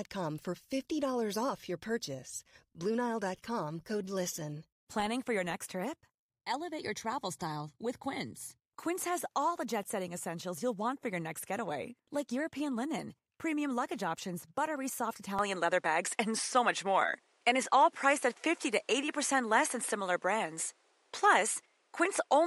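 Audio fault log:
15.39 to 22.46 s, input switched to a poorer device: Right after "luggage options buttery soft", the sound turns duller with no gap at the change. Nothing remains above 11.4 kHz, so the top end loses its air. The level shifts by around 5 dB. A new noise floor appears, roughly 45 dB below the speech. These changes likely come from recording moving to a different, narrower-band microphone with its own tone and background noise.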